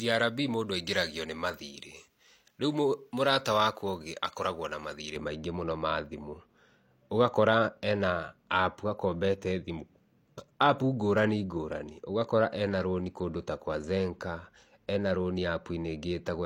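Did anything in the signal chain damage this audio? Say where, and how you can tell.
Yes. Pre-emphasis left on, from 0.00 to 5.16 s: the speech turns thin and bright with harsh sibilance, then the tonal balance settles for the rest of the clip. The treble lift sits about 11 dB higher at 10 kHz than at 1 kHz, matching the J.17 pre-emphasis curve. The transmission stage boosted the highs but the receiving end never applied the complementary de-emphasis, so the lift passes straight through.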